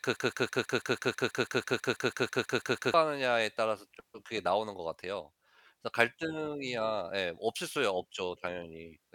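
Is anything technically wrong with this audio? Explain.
Yes. A broken-record loop runs from the very start to 2.94 s, already under way when the audio begins. A fragment of speech about 0.16 s long repeats exactly, back to back, some 17 times, giving a rapid mechanical stutter with no forward progress. The likely cause is a player, encoder or stream that stalled and kept resending the last piece it held, so whatever speech belonged in those first seconds is lost.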